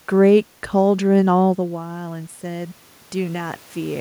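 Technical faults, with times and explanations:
0.85–3.95 s, automatic gain rising: after the input fell by about 13 dB, as the talker moved away around 1.5 s, the gain control slowly raised its gain by about 5 dB over three seconds, so voice and room noise swell up together.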